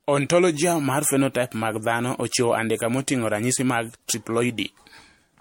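Throughout this speech clip the sound is swirly, smeared and hollow, with blurred attacks and nothing above 16.6 kHz. This is generation loss, likely from MP3 encoding repeated around four times at something near 65 to 68 kbit/s, with each pass's fresh quantisation adding noise and spectral holes.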